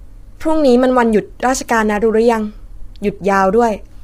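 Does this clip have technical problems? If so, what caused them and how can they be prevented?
Yes. The speech was likely passed through low-delay AAC compression (AAC-ELD) at a rate that fits about 24 kbps. Its short frames resolve pitch harmonics poorly, so throughout the clip the sound is heavily rough and grainy, with noise filling the gaps between harmonics and a dulled or synthetic-sounding top band. Giving the codec a higher bitrate, or using a longer-frame mode where low delay isn't essential, would prevent it.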